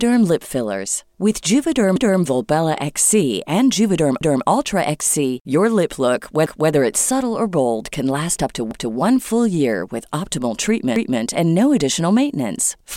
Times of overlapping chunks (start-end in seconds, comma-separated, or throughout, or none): 1.96-2.21, 4.21-4.46, 6.46-6.71, 8.71-8.96, 10.96-11.21